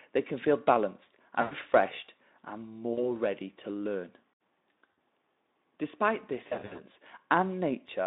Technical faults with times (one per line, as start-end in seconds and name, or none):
1.41-1.54 VoIP packet loss concealed by the speech codec
2.93-3.16 VoIP packet loss concealed by the speech codec
4.92 VoIP packet loss concealed by the speech codec
6.47-6.83 VoIP packet loss concealed by the speech codec